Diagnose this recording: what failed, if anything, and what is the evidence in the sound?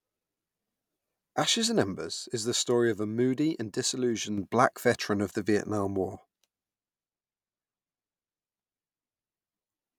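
One channel drops out from 1.98 to 4.38 s and again from 6.15 s to the end. The speech level falls abruptly by about 6 dB each time, recovering in between, because the mono sum keeps only one channel's share. The likely cause is an intermittent connection in the analogue wiring.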